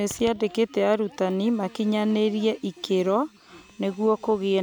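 No technical faults can be heard anywhere in the speech recording.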